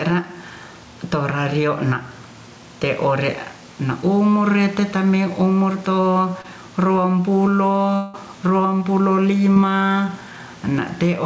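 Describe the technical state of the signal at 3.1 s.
At 3.1 s the speech shows gain pumping, present throughout the clip. The level swings by around 10 dB, likely from input gain set too high driving a fast limiter. The waveform looks flattened.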